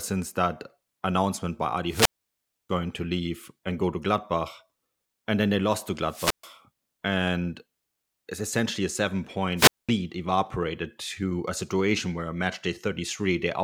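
Speech, interrupted three times by wireless microphone squelch dropout. The radio link fades, hiss briefly rises, and the receiver's squelch mutes the output. Holes occur at 1.87 to 2.70 s (about 640 ms muted), 6.03 to 6.55 s (about 130 ms) and 9.56 to 9.89 s (about 210 ms).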